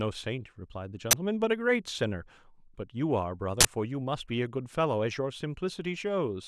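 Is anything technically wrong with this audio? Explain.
Yes, there are two uninitialised buffer bursts in this speech, at 1.11 to 1.13 s and at 3.61 to 3.65 s. Each is a loud blast of harsh digital noise. The playback path sent out a block before any audio had been written into it, so leftover memory came out as samples. The first burst lasts about 21 ms, which fits a 512-sample buffer. The second lasts about 43 ms, which fits a 1024-sample one.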